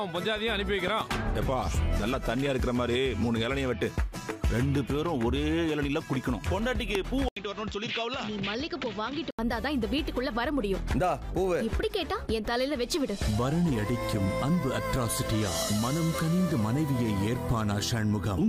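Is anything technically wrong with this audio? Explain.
Yes. A voltage spike, likely from a plug, switch or static discharge, caused a loud pop twice: a double pop from 0.88 to 1.03 s, about 10 dB above the sound, then a single one around 6.95 to 6.97 s, about 15 dB above.

The system likely switched its input to a poorer device from 7.29 to 9.39 s. After an 80 ms gap, the sound turns duller with nothing above 7.6 kHz, drops a few decibels, and gains faint new background noise.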